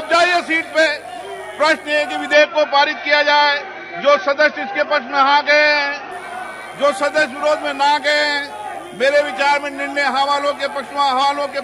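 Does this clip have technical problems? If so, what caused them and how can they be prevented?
Yes. From 2.33 to 6.12 s the sound dulls, losing everything above 6.2 kHz and gaining a faint new noise floor, then clears. This is likely an input switched to a poorer device, its narrower band replacing the original with no gap. Locking recording to one microphone prevents it.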